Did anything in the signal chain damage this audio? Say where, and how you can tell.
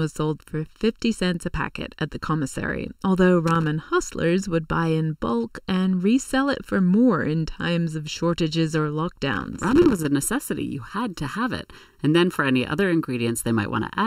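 Yes. Channel delay (comb filtering) runs through the whole speech clip. It sounds hollow and phasey from start to finish. One channel lags the other by under a millisecond before the mono sum. Shared content cancels at evenly spaced notches, the first around 700 Hz.

Loose connector crackle points to the analogue wiring. Irregular scratchy bursts appear from 3.47 to 3.67 s, after "at the commissary although" and before "hustlers would buy in." A longer burst runs from 9.33 to 10.06 s, after "times of shortages or." A worn contact is making and breaking, chopping the signal.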